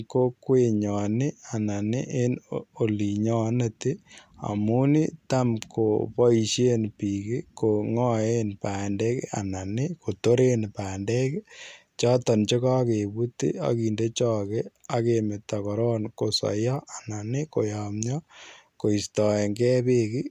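No technical faults can be heard anywhere in the recording, and the speech signal stays continuous and stable throughout.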